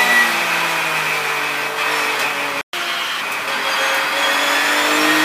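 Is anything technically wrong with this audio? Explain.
Yes. There are two linked faults around the middle of the clip.

Playback stall, 2.61 to 2.73 s: the player likely ran short of data or had its audio thread held up, so nothing reached the output for 120 ms. The sound breaks off abruptly in mid-flow, leaving a clear gap of silence, and then resumes.

Catch-up at higher speed, 2.73 to 3.21 s: to recover the lost 120 ms, the player resamples its backlog and runs it at 1.25 times normal speed for about half a second. Because resampling changes speed and pitch together, the sound plays both faster and higher, raised by roughly four semitones. This gives a brief, chipmunk-like rush before it drops back to normal pitch and pace at 3.21 s.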